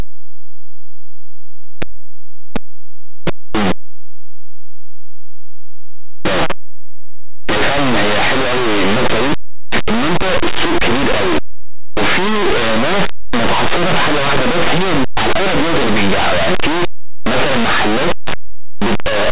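From start to end, linear audio read as companded: linear 8-bit samples decoded as mu-law, so values just on one side of zero swing to extremes while those on the other side stay small, giving very loud, harsh distortion throughout.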